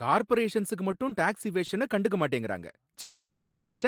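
Scattered short gaps between 0.91 and 1.77 s in this speech, just before "கண்டுக்க மாட்டேங்கிறாங்க", come from about four lost or late packets, each patched by extending the last sound into brief ticks and smears. A call audio freeze from 3.01 to 3.84 s, right after that phrase, stretches the sound into a fading buzz or hiss with about 110 ms of silence, likely because delayed packets emptied the jitter buffer, inserting roughly 0.81 s with nothing lost.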